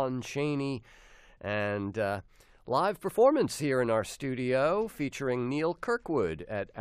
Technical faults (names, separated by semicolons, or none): none